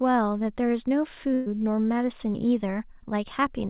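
A burst of packet loss hits at 1.34 to 1.48 s. About 120 ms of speech never arrived in time, so the receiver stretched the last received sound across the gap, fading it, before the speech resumes further on with that stretch gone. The call path's band stops at 4 kHz, consistent with G.711 A-law.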